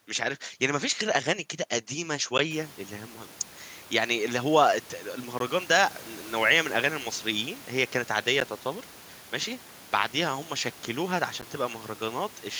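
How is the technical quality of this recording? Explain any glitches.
The recording has one recurring glitch: a gap between chunks, four times.

It occurs at 2.38, 5.39, 8.40 and 11.41 s. Each is a 12 ms hole of silence, spaced about 3.0 s apart. The audio was delivered in 3-second chunks with dead time left at each join. Nothing is lost. The speech just stops abruptly for an instant, heard as a short hole. Room noise rises by about 21 dB around two and a half seconds but stays about 24 dB below the speech.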